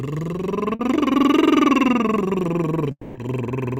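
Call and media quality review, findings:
Short concealed packet loss, 0.75–0.81 s. Brief smear in the music, about 40 ms of audio absent and patched by the receiver's concealment, which extends the preceding sound before blending back. Jitter buffer/decoder PLC. Unlike a dropout: no silence, no fading tail, just a momentary blur.

Long network dropout, 2.91–3.17 s. Concealment carries the last sound forward for about 240 ms as a fading buzz, then roughly 50 ms of silence; playback resumes with that stretch missing. Likely cause: network path interruption. Distinguished from short loss by the audible decay into silence.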